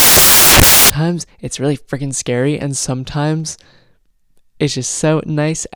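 From the very start to about 0.90 s, the speech is replaced by loud, harsh broadband noise: samples built from the wrong bytes. Each sample's bytes were joined in the wrong order or at the wrong offset, so the rapidly changing low-order bits became the dominant part of every value. A waveform shows a dense, loud block, and a spectrogram shows flat, broadband energy across all frequencies.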